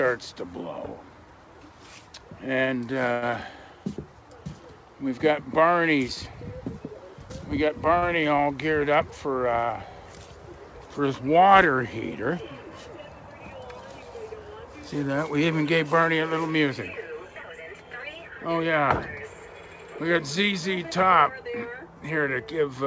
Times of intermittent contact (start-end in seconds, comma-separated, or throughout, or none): none